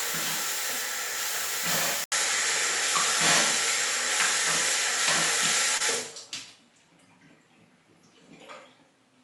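At 2.04 s there's a short gap of about 80 ms, and from then on the top end is gone above 11.4 kHz. The level shifts by a few dB and a faint new noise floor sits well under the signal, so the input most likely switched to a poorer device.

Around 5.77 to 5.82 s there's short concealed packet loss. About 20 ms went missing and was patched over with roughly 25 ms of extrapolated sound, which comes through as a quick smear.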